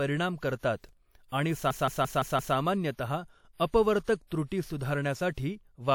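Pre-echo at 0.57 s and 1.28 s: the codec spreads quantisation noise across each block, so a short hiss of 57 and 40 ms creeps in ahead of sharp attacks and softens them. A system hang loop runs from 1.71 to 2.56 s. While the system stalled, the hardware kept replaying one 0.17 s slice, which fits an 8192-sample buffer. It repeats five times at about 5.9 Hz, a machine-gun stutter. Pre-echo returns at 5.32 s, smearing that attack with 54 ms of hiss.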